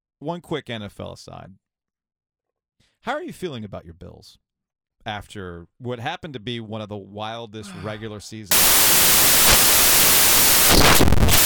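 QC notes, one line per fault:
8.51 to 11.46 s, samples built from the wrong bytes: from 8.51 s to the very end loud, harsh broadband noise, close to white on the louder speech, runs through the speech. The reader is assembling each sample from the wrong bytes, through a one-byte offset, swapped byte order or a wrong alignment assumption. So the jittery low-order bits end up as the big part of every value. The result is harsh noise in place of clean speech.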